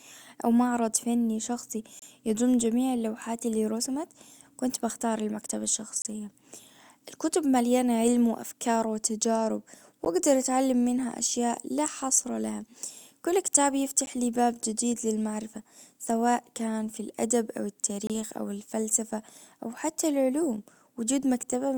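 Timestamps at the joins between 4-second stream segments leave small gaps, and the player fills each with silence. This gap between stream segments hits the speech at 1.99–2.02 s, 6.02–6.05 s, 10.05 s, 14.06 s and 18.07–18.10 s, a steady 4-second rhythm. Each is a hard-edged hole, about 28 ms for the first, second and last, and around 11 ms for the middle two. The speech stops abruptly and resumes with nothing missing, only pushed later.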